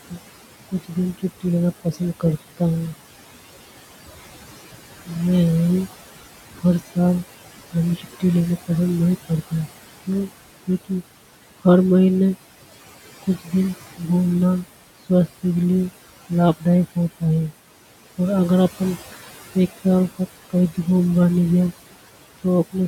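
Throughout the speech, the background sinks between phrases and returns under them: noise suppressor artifacts, with the steady room noise pulled down by about 16 dB frame by frame.

Soft sounds go faint or swallowed in several stretches: speech cut by the noise suppressor, which mistook them for noise. This happens from 0.05 to 2.93 s (under half a second in all, down about 16 dB), from 6.51 to 11.65 s (about half a second, down about 18 dB), from 13.23 to 14.01 s and from 15.09 to 17.22 s (a brief moment each, down about 15 and 16 dB), and from 18.18 to 20.78 s, just before "भी घूमबा नि ग्या", where the cut is briefer still and down about 16 dB. The room noise sits about 14 dB below the speech.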